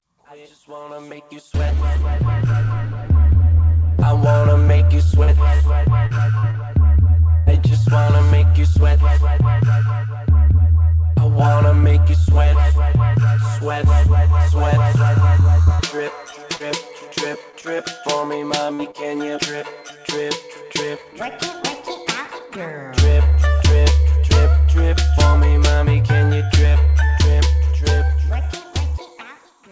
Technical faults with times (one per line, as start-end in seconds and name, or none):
4.00-7.49 repeated packet loss (robotic sound)
15.63-17.65 repeated packet loss (robotic sound)
18.74-18.97 short concealed packet loss